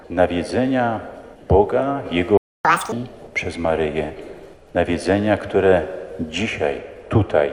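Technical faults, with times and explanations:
2.37–2.65 s, playback stall: The sound cuts out mid-flow and goes silent for about 0.27 s. The player likely ran short of data or had its output thread blocked. Nothing reaches the output until it recovers, so the gap is abrupt.
2.65–2.92 s, catch-up at higher speed: The sound resumes at twice normal speed, pitched up by nearly an octave. The player resamples its backlog to recover the lost time. Speed and pitch rise together, then drop back to normal once the gap is made up.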